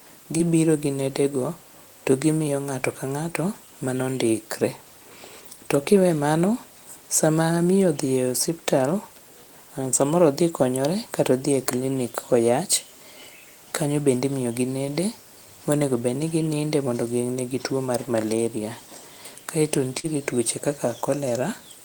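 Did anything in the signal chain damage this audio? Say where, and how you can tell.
Yes. Brief smears at 0.37–0.41 s and 19.99–20.06 s are short concealed packet loss on the network. The decoder stretched the preceding sound across 20 ms and 40 ms gaps.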